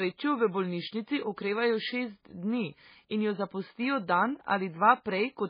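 It's speech, and it has a watery, swirly quality from start to finish, which is likely heavy MP3 compression. Everything above 5 kHz is cut off, and faint detail flickers in and out from frame to frame, which fits a bitrate of around 16 kbps.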